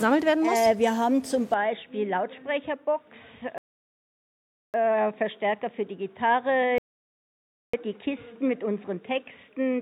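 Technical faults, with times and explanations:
1.54 s onward: input switched to a poorer device, likely. The sound turns dull, with nothing above 3.8 kHz, drops about 5 dB, and gains a faint new noise floor.
3.58–4.74 s and 6.78–7.74 s: rebuffering stall. Playback goes silent, then resumes exactly where it stopped, adding 1.16 s and 0.95 s while more audio downloaded.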